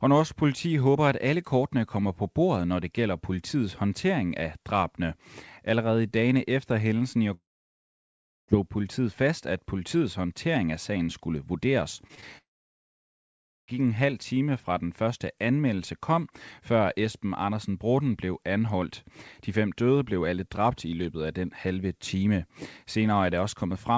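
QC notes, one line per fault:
7.34–8.50 s, long network dropout: about 1.14 s of sound is lost. A brief fading buzz continues the last sound, then about 1.05 s of silence before the audio resumes further on. This is likely a network stall, not a mute, because that concealment tail leads in and the lost stretch never returns.
11.96–12.24 s, repeated packet loss (robotic sound): four short holes, the longest 20 ms, are each patched by stretching the preceding sound, covering about 22% of the span. The choppy texture comes from these rapid gaps. Unlike a dropout, the audio keeps going between them.
12.38–13.70 s, long network dropout: about 1.3 s goes missing, with a short fading fill and then about 1.23 s of silence before sound returns without the lost portion. It follows straight on from the robotic stretch, which points to a deteriorating connection. Through both gaps the band stays capped at 8 kHz, which fits the G.722 call codec.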